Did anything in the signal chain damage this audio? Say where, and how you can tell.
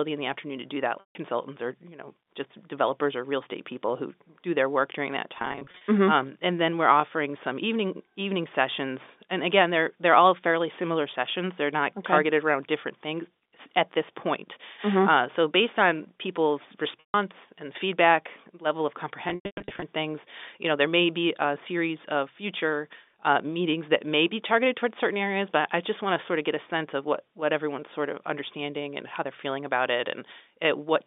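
Yes, at the network stage: packet loss with pitch repetition. Gaps at 1.00–1.15 s, 17.00–17.14 s, and scattered through 5.35–5.81 s and 19.28–19.82 s show buzzy held tones, fading to silence in the longer runs. The receiver looped the last pitch period to conceal the missing packets.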